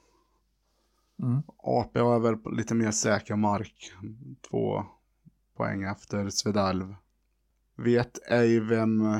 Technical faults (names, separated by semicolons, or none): none